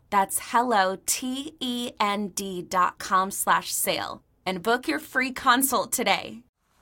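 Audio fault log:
The speech signal stays steady throughout, with no audible technical fault at any point.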